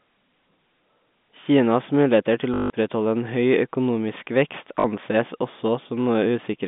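Just after "muligheter til", at 2.54 s, the speech breaks into a robotic stutter lasting 0.16 s. This is packet loss with the last packet repeated. Audio stopped arriving, so the receiver replayed its final packet until fresh data came. The run buzzes at about 50 Hz, which fits 20 ms packets. A shorter 40 ms stutter follows at 4.8 s, heard through the narrow telephone band.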